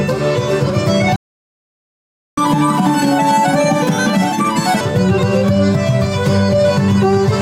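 At 1.16 s the sound cuts out mid-flow and stays silent until 2.38 s, a gap of about 1.2 s. This playback stall was likely caused by the player running out of buffered data or its thread being blocked, so nothing reached the output.

From 2.38 s to 4.81 s the audio resumes in catch-up at higher speed. The player resamples its backlog to run 1.5 times faster, so tempo and pitch both rise, by roughly seven semitones, before settling back to normal speed once the lost time is recovered.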